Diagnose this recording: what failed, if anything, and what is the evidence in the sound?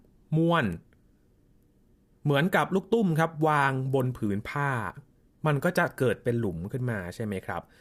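Nothing stood out on listening to this speech recording, and I can't point to any stage where something failed.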